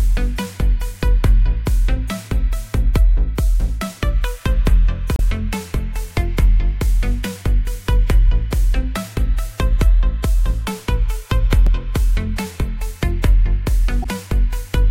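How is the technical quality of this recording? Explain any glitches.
The recording has three short glitches from damaged data in a compressed stream, at 5.16 to 5.20 s, at 11.67 s, and at 14.02 to 14.06 s. In each spot, part of the encoded data was lost or corrupted, so the decoder misread those frames, lost sync and had to find the next valid frame header before decoding cleanly again. Each one breaks the sound as a brief chirp or blip. The middle one is the shortest, at only a few milliseconds.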